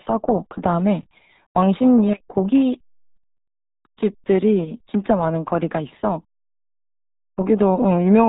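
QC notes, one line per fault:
Throughout, RealAudio 14.4 codec: heavy low-bitrate speech coding, fitting roughly 8 kbit/s, strips everything above 3.8 kHz, leaving muffled, gargly speech.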